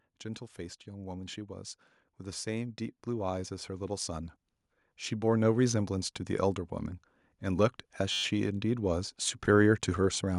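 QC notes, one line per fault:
2.19–6.69 s and 7.26 s to the end, automatic gain rising: the gain control judged the input too quiet and slowly turned it up, by about 8 dB in the first rise, so speech and background swell together. The waveform envelope widens steadily, and the spectrogram brightens evenly across all frequencies, noise floor included.
8.12–8.24 s, system hang loop: the system froze while the hardware kept replaying one 10.67 ms chunk, which fits a 512-sample buffer, 11 times over. This gives a brief steady buzz at 93.8 Hz. The waveform shows identical repeating cycles, and the spectrogram shows harmonic lines spaced 93.8 Hz apart.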